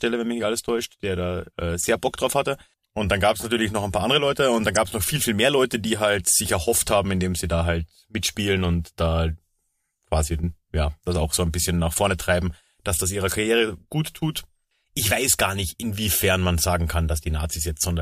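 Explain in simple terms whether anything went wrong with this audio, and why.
Two short glitches of corrupt frame decoded: damaged compressed data got played anyway, so garbled sound came out. One louder glitch spans a couple of frames at 4.74 to 4.77 s, between "und dann" and "es noch viel viel". A fainter one hits a single frame at 11.11 s, after "quasi ja".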